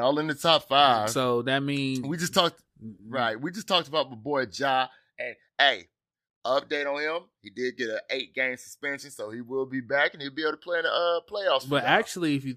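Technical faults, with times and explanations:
Nothing stood out on listening through this speech recording.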